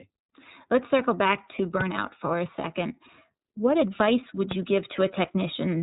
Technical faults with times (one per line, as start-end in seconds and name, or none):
0.00-5.82 iLBC codec
1.81-1.83 loud pop
4.51-4.54 loud pop